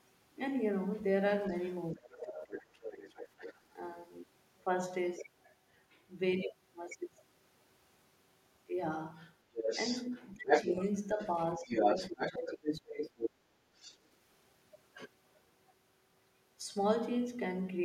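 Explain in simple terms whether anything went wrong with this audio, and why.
Several things went wrong. The other side's voice leaking through can be heard at 1.51 to 1.74 s, 2.54 to 3.73 s, 5.75 to 6.03 s, and loudest from 9.15 to 13.96 s. This is likely a loudspeaker echo the canceller missed.

Speech suppressed in double talk happens from 1.93 to 3.13 s and 10.35 to 13.11 s. The talker's voice sinks sharply while both sides overlap, likely because the canceller turned everything down.

Background gated by the echo canceller follows at 13.31 to 13.73 s. The room sound dips slightly for under half a second, then returns.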